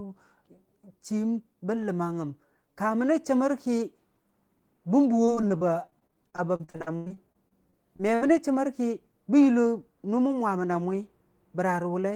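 From 5.25 s to 8.31 s the speech breaks up with repeated packet loss, giving a robotic sound. A couple of dozen holes arrive in quick succession, the longest 96 ms. About 717 ms is patched by stretching the preceding sound, and about 760 ms is simply missing, so roughly a quarter of the span is concealment. It sounds choppy, with pieces missing. A spectrogram shows smeared, frozen harmonic bands broken by vertical gaps, and the waveform shows looped segments and dropouts.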